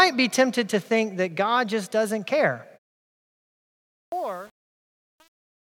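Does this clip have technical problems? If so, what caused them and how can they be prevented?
Yes. Truncation distortion on the fade runs from 3.64 s to the end at 5.63 s and is worst from about 3.77 s onward. As the level drops, the stage computing it discards low-order bits without adding dither, which fits an 8-bit word length. The quiet tail collapses into coarse square steps, so it turns gritty. To prevent it, perform fades at high resolution and apply dither whenever the word length is reduced.

A clipped start after a pause occurs from 4.06 to 4.12 s, following a silence of about 1.36 s. During that silence the output device likely powered down. It had to wake and re-lock before passing audio, so about 62 ms at the onset of the returning speech is missing, and the sound jumps in abruptly without its opening. To prevent it, disable the device's power-saving idle mode or keep a low-level signal running through pauses.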